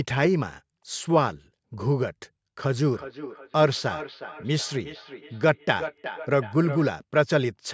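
From 2.93 s to 6.87 s the speech comes back as feedback echo between two devices. A second device in the room replays the call, and this microphone captures it again. Repeats arrive roughly every 0.4 s, peaking about 13 dB below the speech, each thinner and more ringing.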